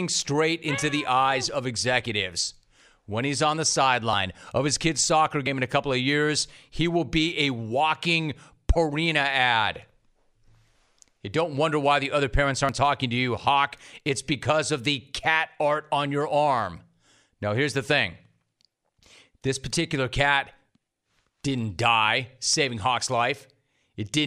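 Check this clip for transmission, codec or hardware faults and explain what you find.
There are four small skips in this speech clip, at 4.13, 12.69, 19.04 and 22.54 s, and they sound like a dropped buffer (overrun). At each one you get a sudden jump in the speech, and no gap. A slice goes missing, roughly 40 ms at the first two and shorter at the later ones. That's likely the capture side falling behind, so the hardware overwrote audio before it was collected and the two ends were butted together.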